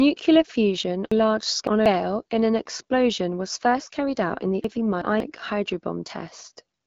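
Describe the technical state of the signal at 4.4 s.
At 4.4 s the speech sits inside an AMR rate drop running from 3.61 to 5.45 s, starting just after "in an explosion was". The link pushes the AMR-WB coder onto fewer bits for the voice, and the roughness heard fits a step from 12.65 down to 8.85 kbit/s. The sound turns grainier and more synthetic. A spectrogram shows the same bandwidth up to about 7 kHz with blurred, noisier harmonics, and the waveform runs on without any gap.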